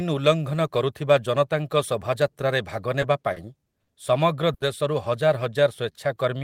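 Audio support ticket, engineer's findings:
Short stall from a late packet, 3.33 s, 3.84 s, 4.54 s: jitter buffer ran empty waiting on late packets. Speech held 30, 40 and 60 ms, then resumes intact, nothing lost.

Jitter buffer slow-down, 5.25 to 6.38 s: receiver rebuilding reserve by repeating pitch periods. Speech runs at 93% speed, same pitch, about 85 ms added, drawn out.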